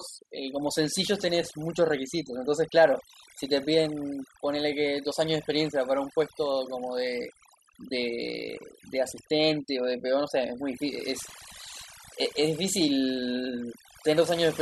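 Speech, and the whole take suffers from overdone noise removal. The denoiser was pushed too hard, so bands near its noise estimate get gated off along with the quieter parts of the voice. Gaps fall to near silence with twinkly specks.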